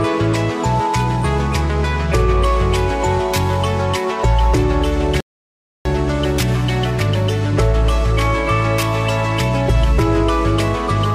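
At 5.21 s a rebuffering stall drops the sound into silence for 0.65 s; playback then resumes exactly where it stopped, unlike a dropout, where audio is lost.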